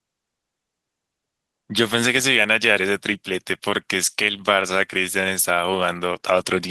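Speech, with no audible technical fault anywhere in the signal.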